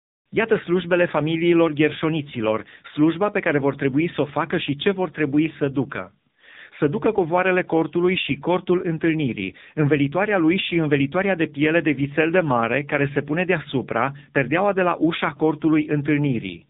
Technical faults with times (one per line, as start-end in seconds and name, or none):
0.00-16.70 AMR narrowband mobile codec